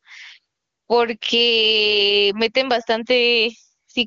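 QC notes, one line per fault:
Throughout: gain pumping. The level swings by roughly 10 dB. Loud and quiet syllables sit closer together than they should, so the speech sounds squashed. This is likely an input gain set far too high, with a fast limiter or compressor clamping down on each peak. The band stops near 7.6 kHz, as AMR wideband does, with the codec running clean at a rate that fits its top mode.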